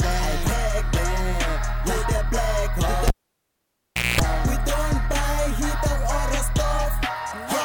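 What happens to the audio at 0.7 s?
Nothing goes wrong at 0.7 s; the audio carries on intact through that moment, with no dropout, click or distortion to be heard.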